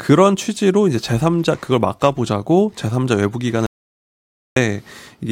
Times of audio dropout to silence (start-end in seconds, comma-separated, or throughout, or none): 3.66-4.56